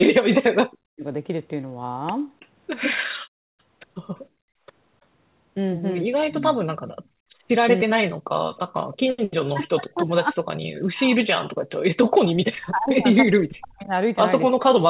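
Speech clip, carried over a narrowband call path with nothing above 4 kHz, consistent with 64 kbps G.711 mu-law, and showing three kinds of echo-canceller fault. From 0.04 to 1.04 s, and again from 6.06 s to the end, the talker's level collapses by roughly 40 dB, most likely speech suppressed in double talk, where the canceller mistakes simultaneous far-end activity for echo and attenuates everything. Echo leak is likely behind faint delayed copies of the voice at 2.40 to 2.47 s and 8.56 to 8.97 s, trailing by 315 and 321 ms at around 30 dB below the speech, residue the canceller failed to remove. Background gated by the echo canceller pulls the room sound down about 30 dB from 4.29 to 4.66 s and about 31 dB from 6.93 to 7.44 s, the drops lasting roughly 0.4 and 0.5 s before recovering.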